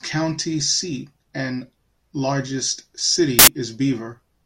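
The clip is speech. From 3.39 to 3.47 s, the samples are built from the wrong bytes. The reader misassembles each sample's bytes. The fast-changing low bits become the large part of each value. For about 85 ms, the sound turns into loud, harsh broadband noise.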